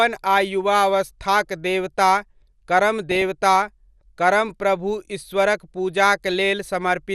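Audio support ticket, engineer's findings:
MP2 compression, whole clip. Speech sounds dull, with granular gurgle. Likely cause: MPEG Layer II encoder starved of bits, fitting roughly 80 kbps. Upper sub-bands drop out and flicker. Remaining bands are coarsely quantised.

DAB burbling, brief burst at 1.49 s, then burbling from 2.99 to 3.22 s. Probable component: DAB receiver front end on a weak signal. A bit error rate of around a tenth of a percent gets past error correction. Corrupted samples put short blips of noise in single sub-bands.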